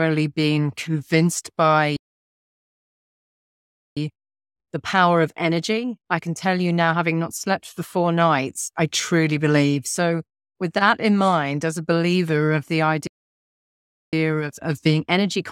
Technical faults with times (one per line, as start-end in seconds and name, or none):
1.96-3.97 playback stall
3.97-6.97 time-compressed catch-up
13.07-14.13 playback stall
14.13-15.52 time-compressed catch-up